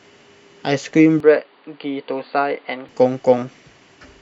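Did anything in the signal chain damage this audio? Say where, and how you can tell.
Yes. From 1.20 to 2.89 s the speech turns dull and boxy, with nothing above 4.7 kHz, and drops about 5 dB. A faint new background noise appears, around 40 dB down. There is no gap. This is likely an input switched to a poorer device, at the capture stage.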